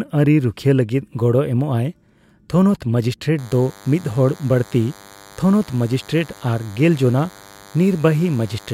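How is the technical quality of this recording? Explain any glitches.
The recording has one clear fault, a DECT cordless phone buzz from 3.38 s to the end. Radio bursts every 10 ms, rectified by the audio circuit, produce a thin 100 Hz buzz well below the speech, seen as evenly spaced harmonic lines on the spectrogram.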